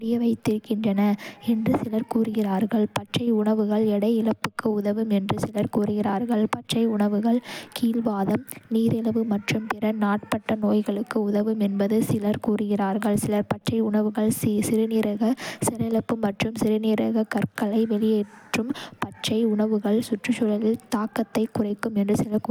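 No technical faults are audible.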